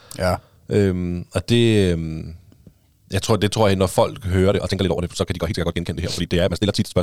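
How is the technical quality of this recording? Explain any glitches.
The recording has one clear glitch, a time-stretched section near the end. From 4.45 s, just after "tror jeg når folk", to the end at 7.02 s, the speech suddenly runs almost twice as fast, about 1.94 times normal speed. The pitch does not rise. The likely cause is software squeezing this part to fit a shorter length by dropping short slices of audio. That is why the pace jumps abruptly and the sound turns rushed.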